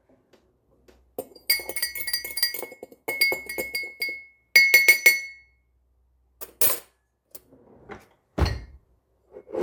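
A recording of sounds with one dropout: at 6.48 s, compressed frames are skipped, so the audio jumps ahead by around 150 ms, which fits about seven missing 24 ms codec frames.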